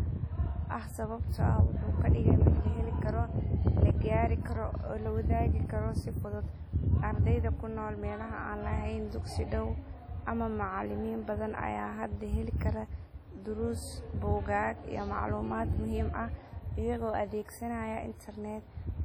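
From start to finish the speech carries heavy codec damage, most likely from WMA compression. The sound rings and smears. Quantisation noise spreads across long transform blocks, so each syllable drags a washy tail. A hiss rises and falls with the voice. Quiet spectral detail has been zeroed. The damage is severe enough to suggest a low bitrate, around 32 kbps. Nothing is audible above 19.9 kHz.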